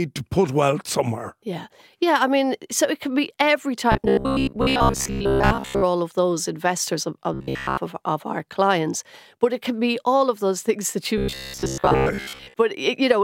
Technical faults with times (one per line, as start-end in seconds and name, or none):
3.92-5.84 robotic sound from repeated short buffers
7.34-7.78 robotic sound from repeated short buffers
11.18-12.54 robotic sound from repeated short buffers